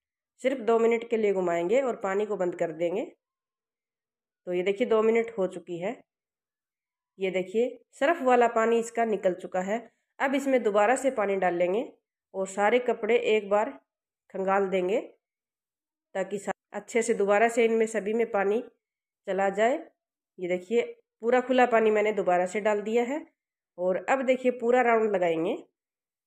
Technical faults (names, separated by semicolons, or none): none